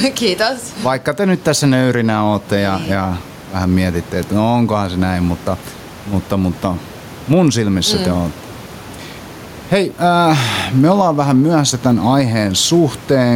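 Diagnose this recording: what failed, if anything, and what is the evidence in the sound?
Gain pumping runs through the whole speech clip. The room noise sits about 28 dB below the speech, and the gain swings by around 10 dB. The likely cause is input gain set far too high, with a fast limiter in call processing clamping each peak. On a waveform, the peaks are held to a similar height. On a spectrogram, the noise floor brightens in gaps and darkens under speech.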